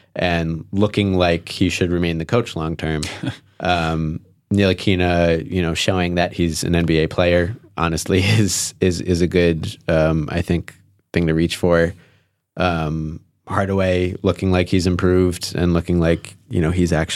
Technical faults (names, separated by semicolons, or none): drift correction step